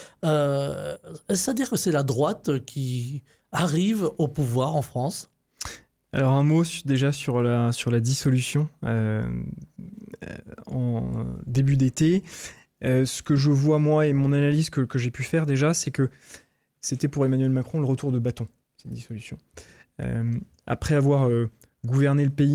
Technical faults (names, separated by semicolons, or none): none